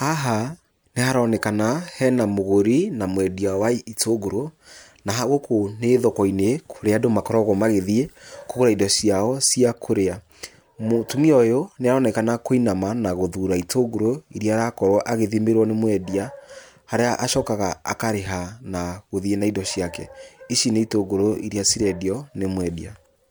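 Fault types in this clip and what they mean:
No technical faults can be heard in this speech recording. There is nothing here to list under any fault type.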